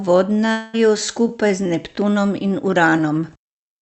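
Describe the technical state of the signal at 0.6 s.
At 0.6 s the signal sits inside a gap running from 0.51 to 0.75 s. The sound there fits a long network dropout, the likely cause. Fresh audio stops arriving, so the receiver stretches the last sound into a fading buzz or hiss. That fill covers about 220 ms, so no true silence appears. Real audio returns at 0.75 s, and the lost stretch never plays. Around it, the call codec's band tops out near 8 kHz.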